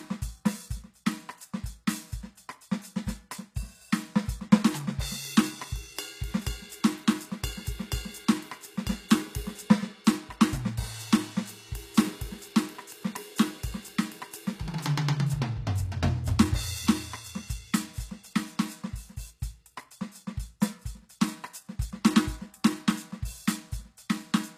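Throughout the music, nothing sounds above about 14.9 kHz, and the top end has a dull quality. This is low-bitrate audio saved at a high bitrate: the audio was likely first squeezed by a low-bitrate codec, then re-encoded as high-rate MP3, which cannot restore what was lost.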